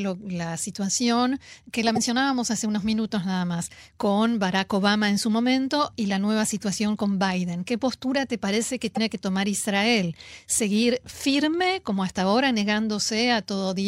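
A likely broken MP3 bit reservoir: with frames missing from the stream, the frame that follows reaches back for its borrowed bits and decodes bytes that belong to another frame. In this speech the sound skips forward, and a brief disruption about 30 ms long, close to one 26 ms MP3 frame, fills the gap. It happens twice: from 1.95 to 1.98 s, between "situación que la" and "hace unos minutos nada", and from 8.95 to 8.98 s, between "postura te parece que" and "que tomar".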